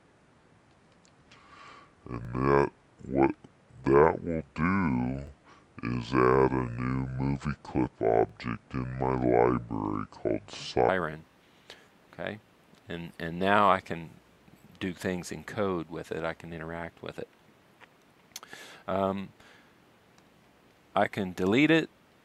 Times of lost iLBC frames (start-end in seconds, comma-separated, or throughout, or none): none